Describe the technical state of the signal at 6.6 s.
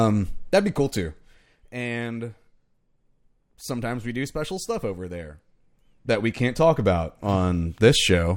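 At 6.6 s the signal carries zipper noise, running from 5.23 to 6.74 s, just after "do special stuff over". A level shift of about 10 dB is applied in unsmoothed steps, around a hundred a second. Each step clicks, producing a fine ticking buzz.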